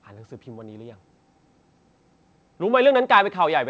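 Speech carried over a call path whose band stops at 8 kHz, consistent with a wideband codec such as G.722, with no technical faults to report.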